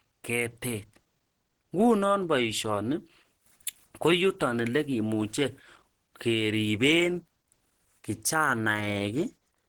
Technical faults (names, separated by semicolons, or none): Opus compression